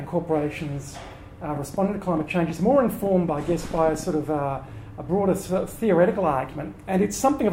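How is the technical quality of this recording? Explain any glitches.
There's one clear glitch: a train of clicks from 1.57 to 4.04 s. Around twenty sharp, similar ticks arrive unevenly, about 8.5 per second, and they peak roughly as loud as the sound itself. It's likely outside interference or a faulty connection or power supply injecting repeated pulses.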